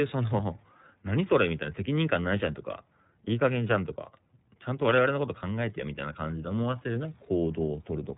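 Thin, slightly rough and synthetic speech throughout, with nothing above 3.8 kHz: plainly audible iLBC codec damage, consistent with its 30 ms frame mode.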